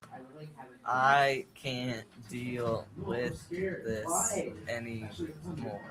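No technical faults can be heard anywhere in the recording. The speech plays from start to finish without any disturbance.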